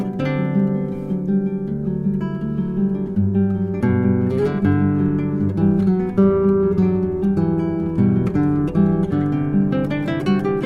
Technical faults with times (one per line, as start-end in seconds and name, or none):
none